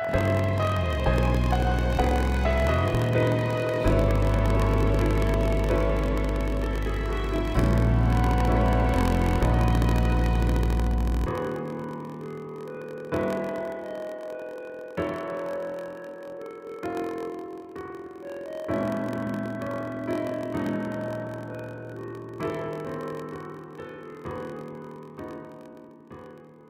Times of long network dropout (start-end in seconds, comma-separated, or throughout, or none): none